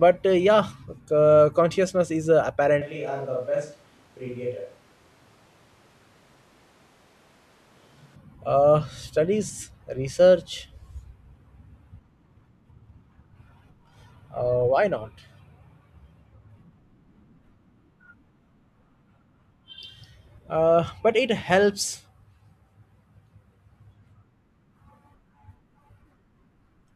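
From 2.82 to 8.16 s, after "uh consciousness is uh", the close microphone likely dropped out, causing a switch to a distant microphone. The speech turns suddenly roomy and hollow, thinner in bass, about 5 dB quieter, with room noise around 30 dB below it, until "uh studies research".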